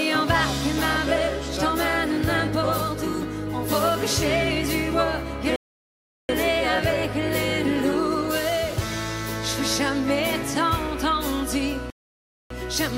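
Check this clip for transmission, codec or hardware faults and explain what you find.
Two playback stalls turn up here, at 5.56 to 6.29 s and 11.90 to 12.50 s, lasting about 0.73 s and 0.60 s. The sound drops into dead silence mid-flow, then carries on, most likely because the player's buffer ran dry or its thread got blocked.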